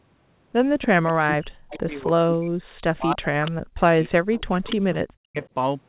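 From 0.81 to 1.36 s there is an echo leak. The far end's echo canceller likely let its loudspeaker pickup through, so a delayed copy of the speech returns 289 ms late at about 10 dB below the direct sound.

Overlapping it, from 0.88 to 2.64 s, comes speech suppressed in double talk. With both sides talking, the canceller likely could not tell talker from echo and turned both down. The speech dips by up to roughly 40 dB and drops out in pieces for about one and a half seconds.

The same suppression returns from 2.96 to 4.13 s. Within it, a brief echo scrap at 3.46 to 3.51 s sits about 15 dB down.

A longer echo follows from 4.31 to 4.99 s, again about 15 dB down. Suppression cuts in once more from 4.47 to 5.43 s. A faint final echo at 5.44 to 5.48 s sits about 30 dB down.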